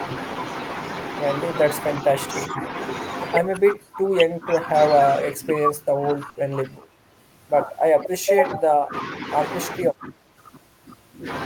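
The speech dips at 2.48, 3.74, 5.19, 5.93, 6.51, 7.95 and 9.77 s, each time sinking by roughly 5 to 15 dB for a fraction of a second. This is speech suppressed in double talk, likely an echo canceller turning the talker down while the far side spoke. At 6.29 s a burst of packet loss holds the last sound as a fading smear for 60 ms, then jumps ahead past a further 60 ms of missing audio. The skip in time sets it apart from the level dips.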